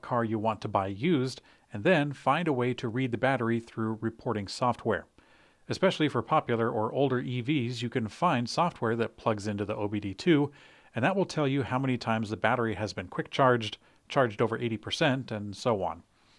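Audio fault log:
The signal holds steady across the speech, with no breaks, level jumps or added disturbances anywhere in it.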